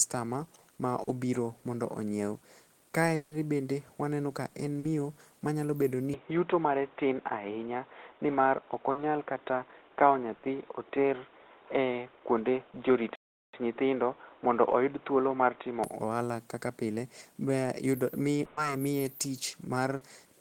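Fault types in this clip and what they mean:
Short concealed packet loss: Small pieces of the stream arrived too late to decode and were papered over by extending the preceding sound for about 40 ms before blending back into real audio. This happens at 1.03 s just before "obiro mondo", at 4.79 s, at 8.91 s and at 19.97 s. Each is heard as a brief smear or wobble lasting well under a tenth of a second, with about 40 ms of the original missing.
Long network dropout: From 3.15 to 3.34 s, just before "bende waneno ka", the audio gives way to a continued, fading rendering of the last sound for about 160 ms instead of real signal, with no fully silent stretch. The speech then resumes further on, with that portion gone. The length of the fill suggests the likely cause is a stall in packet delivery.
Input switched to a poorer device: At 6.14 s the sound turns duller and boxier with no gap at the change, and stays that way until 15.84 s, where it clears again. 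Through that stretch the band is narrower, and a new background noise floor sits around 30 dB below the speech, while loudness stays roughly the same. The likely cause is a change of capture path, such as a headset's narrowband call profile.
Burst of packet loss: Two longer holes appear where several consecutive packets were lost. At 10.35 to 10.46 s about 80 ms is replaced by a held, decaying continuation of the previous sound. At 18.45 to 18.60 s, just before "miye tich", about 120 ms is filled the same way, with no silence. In both cases the speech picks up later, with the intervening audio missing.
Playback stall: From 13.16 to 13.53 s the output simply stops, leaving a silence of about 0.38 s in mid-flow before the sound continues. There is no concealment buzz or hiss, only an abrupt halt and restart. This points to a likely output-side starvation, where the player's buffer emptied or its audio thread was blocked, rather than anything missing from the incoming stream.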